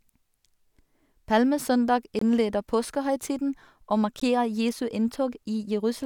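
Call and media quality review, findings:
Gap between stream segments at 2.19–2.22 s (about 23 ms) and 4.20 s (about 16 ms). The speech drops to hard-edged silence, then resumes with nothing missing. The timestamps of consecutive segments don't meet, and the player pads with zeros. The 2-second spacing points to segment boundaries in the packager or muxer. Waveform: flat silent run with abrupt edges. Spectrogram: full-band vertical blank strip.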